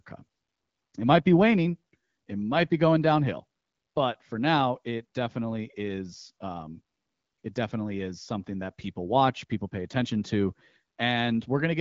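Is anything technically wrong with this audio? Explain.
No, nothing here counts as a technical fault; it's just speech carried over an AMR wideband (HD Voice) connection at 12.65 kbit/s, with the light coding character and the missing top end you'd expect from that kind of line.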